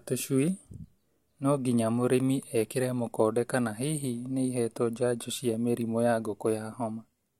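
No technical faults can be heard anywhere in this speech recording.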